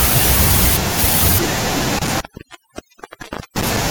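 From start to finish the recording suffers from overdone noise removal: a noise reduction stage was pushed far too hard on a noisy source, so it drives individual frequency bands down or out entirely whenever they sit close to its noise estimate, and the softer parts of the speech are cut along with the noise. The background drops and breaks up into twinkling, chirping specks.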